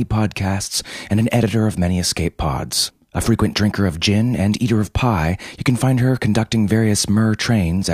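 No technical faults in this speech.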